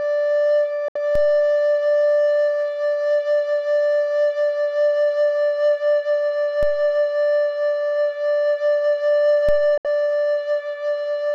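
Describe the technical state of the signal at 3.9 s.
At 3.9 s the music plays through intact, with no dropout, distortion or other technical fault at that moment.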